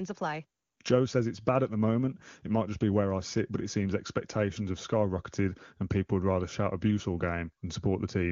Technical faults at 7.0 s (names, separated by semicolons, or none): none